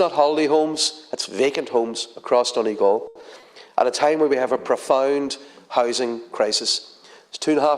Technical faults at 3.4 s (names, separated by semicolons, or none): short concealed packet loss